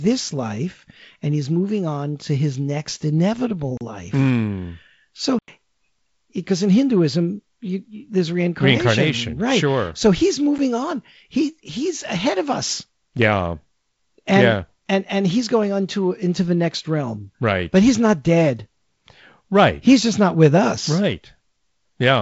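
A short hole sits at 3.77 to 3.81 s (about 35 ms), a longer dropout at 5.39 to 5.48 s (about 93 ms), and a single tick at 10.58 s, where the gap lasts under 9 ms. All three are a block of digital silence: the output buffer was likely not filled in time and zeros went out instead, cutting the sound off abruptly. The 93 ms gap fits a 4096-sample buffer. Beneath this, the G.722 wideband telephone coding limits the band to roughly 7.7 kHz.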